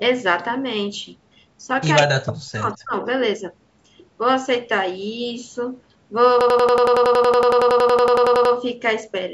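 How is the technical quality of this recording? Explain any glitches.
The recording has three distinct glitches: two brief call-processing faults early on and a long stuttering loop near the end. The call microphone processing band-limits the audio, with nothing above 8 kHz.

From 2.06 to 2.94 s, the speech dips by up to about 40 dB for most of that stretch. This is speech suppressed in double talk, likely from an echo canceller ducking its own talker along with the loudspeaker echo.

From 2.43 to 2.49 s, an echo leak is audible: a faint copy, about 30 dB below the speech, trailing 208 ms behind. It is likely loudspeaker pickup that the canceller missed. A delayed repeat distinguishes it from reverb.

From 6.41 to 8.55 s, a system hang loop replays one 92.88 ms piece 23 times at 10.8 Hz. That length fits a 4096-sample buffer. The exact repetition of a loop this long gives a machine-gun rattle instead of a buzz.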